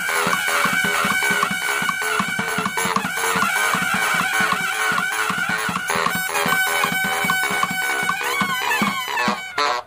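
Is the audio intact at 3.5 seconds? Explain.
No, a doubled audio track runs throughout, including 3.5 s: a second, equally loud full-band copy trails about half a second behind, likely from a slower capture path.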